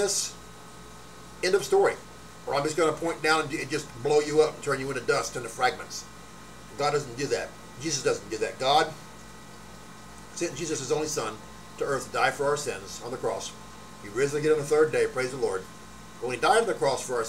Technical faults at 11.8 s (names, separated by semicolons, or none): none